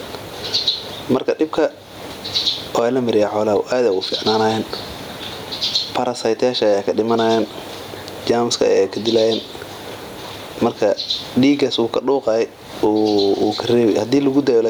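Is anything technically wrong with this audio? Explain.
Yes, there's gain pumping all the way through the speech: the gain swings by something like 20 dB, so the whole thing sounds squashed, while the room noise sits about 38 dB down. Likely the mic gain is set way too high and a fast limiter keeps clamping it.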